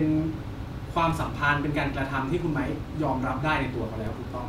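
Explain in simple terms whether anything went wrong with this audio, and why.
Two low thumps break into the speech, one at 1.10 s and one at 4.07 s, while the talking carries on untouched. Each is a DC step: the waveform's resting centre line suddenly jumps off zero, like a floor shifting a notch, and that sudden shift is heard as a thud. The offset doesn't stay put; it drains away as a 20 Hz high-pass filter gradually pulls the signal back to centre.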